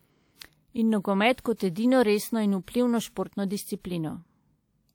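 Speech with pre-echo at 1.32 to 1.38 s and 2.63 to 2.68 s: a short hiss of about 57 ms and 51 ms leads each sharp attack, softening it, because the transform codec spread quantisation noise sized for the attack across the quiet portion preceding it.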